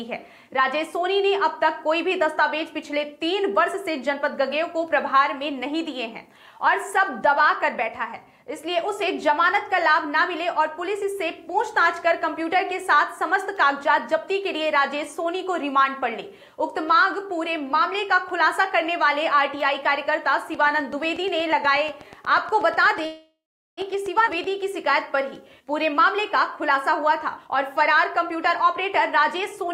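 A train of clicks runs from 20.55 to 24.45 s: roughly 30 evenly spaced ticks at 8.2 per second, peaking at about the level of the sound itself. Interference from nearby equipment is the likely cause. A call audio freeze sits inside it, from 23.05 to 23.80 s. The audio stalls for 720 ms, trailing off into 380 ms of silence, then resumes where it stopped with nothing lost. Late packets draining the jitter buffer are the likely reason. A skip ahead follows at 24.25 to 24.30 s. Roughly 200 ms of audio is dropped, and the two sides are joined almost directly. Then comes a jitter buffer speed-up. From 25.36 to 26.01 s the audio runs at 110% with unchanged pitch, losing about 70 ms. From 26.57 to 29.72 s it runs at 106%, losing about 200 ms. Both stretches sound hurried as the receiver trims short pieces to cut the built-up delay.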